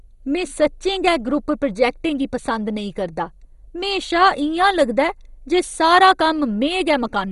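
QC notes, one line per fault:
Throughout, MP2 compression: the speech is dull with nothing above 11.2 kHz, and heavy gurgling, granular distortion runs through it as upper sub-bands switch on and off and the remaining bands are coarsely quantised, which fits a low bitrate of around 56 kbps and is likely from MPEG Layer II coding. Unlike a simple low-pass filter, the top flickers and grains rather than rolling off cleanly.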